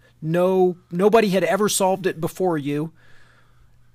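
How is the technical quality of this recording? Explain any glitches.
Nothing goes wrong technically in this bit of speech, so there aren't any glitches to explain.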